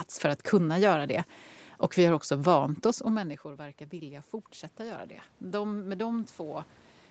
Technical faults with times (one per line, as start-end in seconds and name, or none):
3.11-6.76 automatic gain rising